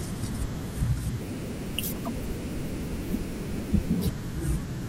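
A speech clip with a section at the wrong speed from 1.21 s to 4.07 s, running 1.4 times too fast and about five semitones higher, likely from playback against a mismatched clock. On a spectrogram the harmonics jump upward and then drop back at those edges. In the waveform the syllables look squeezed closer together.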